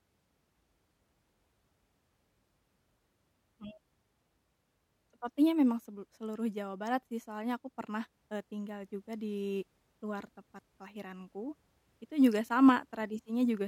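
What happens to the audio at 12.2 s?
Nothing goes wrong at 12.2 s; the speech runs through that moment intact, with no dropout, click or other fault.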